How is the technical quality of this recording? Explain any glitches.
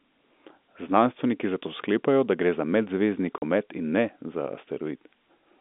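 There's one clear glitch: a short dropout in the speech. The telephone-band sound you hear throughout, with nothing above about 3.6 kHz, comes from the G.711 telephone coding, and its faint quantisation hiss isn't a problem here.

At 3.38 s the audio cuts out for 40 ms, until 3.42 s. That's packet loss filled with silence. Some packets never arrived, and the receiver played plain silence in their place instead of patching the gap. The 40 ms fits two 20 ms packets going missing together. The signal drops straight to silence and then jumps straight back, so the gap has hard edges.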